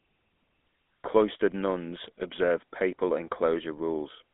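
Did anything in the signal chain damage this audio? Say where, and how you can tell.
Yes, at the codec stage: the speech has passed through the GSM full-rate codec for its whole length. The band is held to about 200 Hz to 3.5 kHz, and a plainly audible buzzy, gravelly roughness sits on every voiced stretch. That comes from the codec rebuilding the voice from a vocal-tract model driven by sparse, regularly spaced excitation pulses, which fits the 13 kbps full-rate scheme. A simple telephone band-limit would sound dull but smooth, not grainy.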